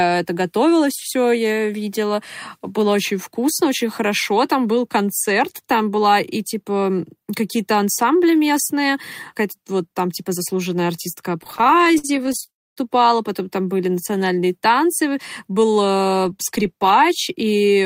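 It's a speech clip with three network-playout faults bunched in the back half. Right after "там типа заслуженная артистка", from 11.41 to 12.50 s, you get repeated stalls (stutter): the jitter buffer keeps running dry, and the receiver stretches the last bit of sound to cover each hole. There are 28 of these little gaps, none longer than 54 ms, adding up to 319 ms, so about 30% of that stretch is filler. Nothing actually drops out, but the delivery drags and judders. Straight after that, from 12.50 to 12.79 s, it turns into a proper call audio freeze: a 270 ms hold where the concealment fades and 260 ms of it is effectively silence. It then picks up cleanly with "потом там были", nothing lost, just a gap pushed in. That pattern points to packets being held up in transit, likely a sudden delay jump of about 270 ms. Later, just after "танцы был", from 16.17 to 16.73 s, there's a jitter buffer speed-up. 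The buffer's now carrying more than it wants, so the receiver trims short pitch-period slices, around 70 ms in total, and plays that bit at about 110% speed. Pitch stays put, but the phrase comes out noticeably rushed.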